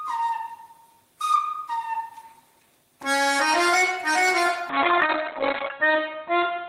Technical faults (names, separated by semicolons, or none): call bitrate drop